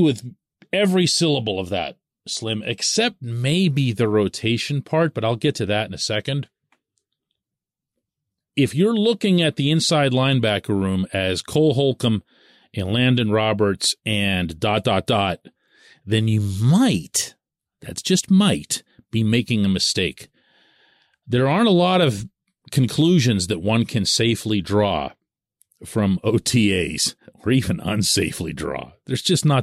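A speech recording, and nothing technically wrong turns up anywhere in it.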